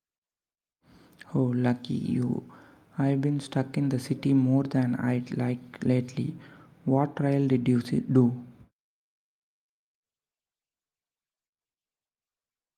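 No technical faults are audible anywhere in it.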